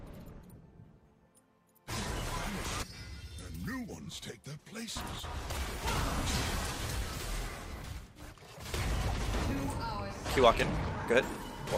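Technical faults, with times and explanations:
No technical faults can be heard anywhere in this clip.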